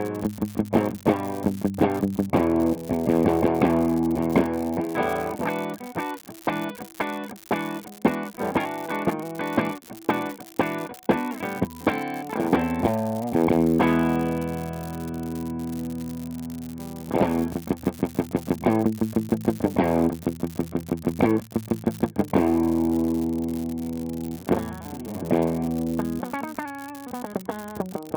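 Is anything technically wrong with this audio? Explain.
Yes. Throughout, a steady crackling fizz runs under the sound and persists in pauses: an unreliable data bit randomly flips, adding identical spikes of about -22 dBFS.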